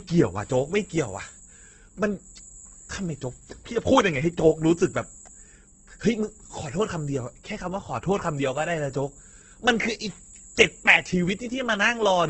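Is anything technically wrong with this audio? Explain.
Yes, two faults run through the whole speech clip.

The first is USB whine, present throughout. Current drawn by the USB bus in 125-microsecond microframes leaks into the audio through power or ground, leaving a steady 8 kHz tone roughly 25 dB below the speech, heard as a thin, fixed-pitch whistle.

The second is damage most likely from Opus compression, also throughout. Short of bits, the encoder fills bands with noise or folded lower bands. This leaves the speech grainy and rough, with nothing above 8.4 kHz, which fits a low bitrate around 12 kbps.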